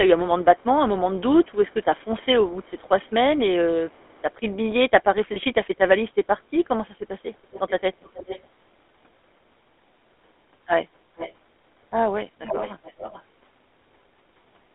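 GSM full-rate codec damage runs through the whole of this speech recording, and it is plainly audible. The voice has that buzzy, gravelly texture that comes from modelling the vocal tract and exciting it with a coarse, regularly spaced pulse train at 13 kbps. The line band sits at about 250 Hz to 3.6 kHz, so the low body and everything bright above it are gone.

Echo leak appears at 1.17 to 3.12 s, 3.89 to 4.33 s, 8.04 to 8.48 s, 11.16 to 11.34 s and 12.46 to 13.23 s. A delayed copy of the speech trails behind the direct sound, most likely because a loudspeaker-side echo canceller let some of its microphone pickup return down the line. In the first two stretches the copy lags by 332 ms and is very faint. From 8.04 s onward it lags by 413 ms and is far more prominent, loudest in the final stretch at about 10 dB below the speech.

Lost GSM frames cause a brief glitch at 5.34 to 5.37 s. The decoder covered the gap by repeating the last good frame's settings, so the sound freezes into a short, rough metallic ring. 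That fits a single 20 ms frame dropping out.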